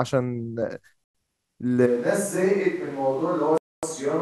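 At 1.04 s the speech drops to silence for 108 ms and resumes at 1.15 s, a Bluetooth stall. The cause is likely radio interference delaying packets long enough for the headphones' buffer to empty, so playback halts until retransmitted data arrives. It sounds like a clean, abrupt hole in the audio rather than a fade or a click-laden dropout.

From 1.88 s to the end, the sound changes suddenly to what is most likely a switch to a distant microphone, as if the close microphone's feed failed and a farther source, such as a camera microphone, took over. The speech becomes roomy and hollow, thinner in the low end, and roughly 10 dB quieter. Room noise sits only about 30 dB below the speech, so the background is noticeably more present.

Within that distant section, a second Bluetooth stall cuts the sound for 252 ms, from 3.58 s to 3.83 s. It is likely the same buffer-underrun silence as the first, but long enough to read as a distinct break in the speech.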